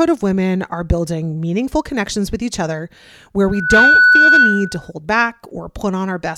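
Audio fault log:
3.47–4.91 s, loudspeaker feedback squeal. Just after "with each other where", a steady tone near 1.5 kHz appears and swells over roughly a third of a second. It settles at around 10 dB above the speech and holds until 4.91 s, when it stops. The microphone is hearing its own loudspeaker. At 1.5 kHz the loop gain passes one, so that frequency keeps feeding itself and grows into a howl.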